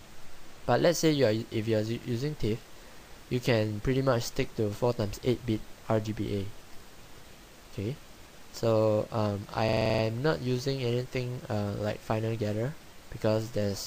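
At 9.69 s there's a system hang loop: the machine stalled while the audio hardware kept replaying one 42.67 ms chunk, eight times through to 10.03 s. That gives a rattly stutter at about 23.4 Hz, which fits a 2048-sample buffer.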